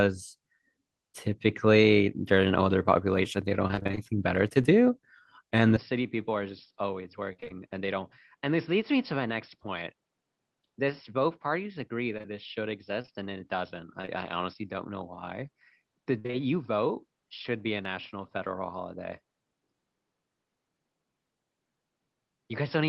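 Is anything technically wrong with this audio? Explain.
Yes. From 3.67 to 4.67 s, 7.33 to 7.52 s and 16.19 to 16.35 s, repeated packet loss strikes. Each hole is patched by extending the last sound, so the speech turns choppy and robotic.

At 5.76 s, the input likely switched to a poorer device. With no silence at the change, the speech stays duller to the end, with nothing above 5.4 kHz, about 10 dB quieter, and faint new noise.

Between 12.18 and 14.09 s, scattered short gaps appear. About seven lost packets are each bridged by continuing the previous sound, leaving brief ticks and hiccups.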